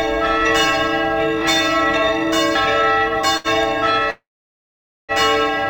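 At 3.37 to 3.47 s the sound briefly hangs, with one moment drawn out by about 70 ms and a faint buzzy dip before it resumes. This is a short stall from a late packet: the jitter buffer ran empty, so the receiver stretched the last sound until the packet arrived, losing nothing.

From 4.10 to 5.12 s the sound turns into a fading buzz and then falls silent for about 0.86 s before picking up again where it left off. This call audio freeze likely came from packets held up in transit that emptied the jitter buffer. The receiver filled the wait by continuing the last sound, inserting roughly a second of delay without dropping any audio.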